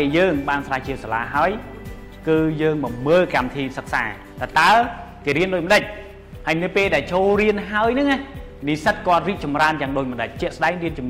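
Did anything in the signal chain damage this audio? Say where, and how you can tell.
No, nothing in the signal chain stood out as damaging this audio on listening.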